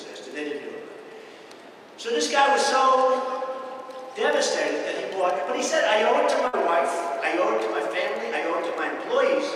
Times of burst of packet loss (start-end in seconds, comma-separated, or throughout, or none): 6.47-6.55